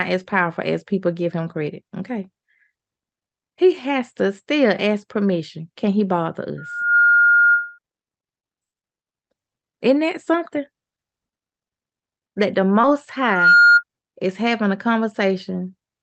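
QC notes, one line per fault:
6.58–7.79 s, loudspeaker feedback squeal: a 1.4 kHz tone swells over about 0.4 s to about 5 dB above the speech, as the mic-to-speaker loop gain exceeds unity.
12.81 s, short concealed packet loss: about 20 ms missing, filled by extending the preceding sound and crossfading back, heard as a brief smear in the speech.
13.21–13.83 s, loudspeaker feedback squeal: the same 1.4 kHz loop tone returns, building in about 0.3 s to about 10 dB over the speech, ending just before "is having a".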